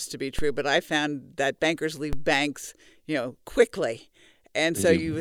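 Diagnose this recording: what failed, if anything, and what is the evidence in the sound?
The converter or analogue input shifted its zero level twice, a DC step of about -17 dBFS at 0.39 s (after "to be") and 2.13 s (after "that bankers"). Each jump sounds as a low thump, and the offset then drains away through a roughly 2 Hz high-pass while the speech continues unchanged.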